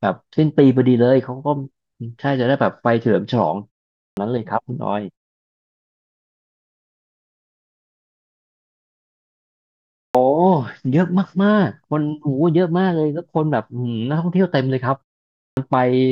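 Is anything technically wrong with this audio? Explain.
Yes. Three times the speech resumes abruptly out of silence, its opening sounds missing: at 4.07 s after a 0.44 s pause, at 10.05 s after a 4.96 s pause, and at 15.48 s after a 0.52 s pause. Roughly 90 to 100 ms is lost each time. This is a clipped start after a pause: the output device powers down during silence and needs a moment to wake and lock again, so the first part of each returning sound never plays. The muted pauses themselves cost no speech.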